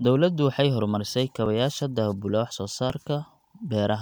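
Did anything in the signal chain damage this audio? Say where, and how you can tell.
Yes: a tiny skip at 1.46 s, after "waxay horumarisay", and at 2.9 s, likely a driver-level dropped buffer (overrun) losing a few milliseconds each time.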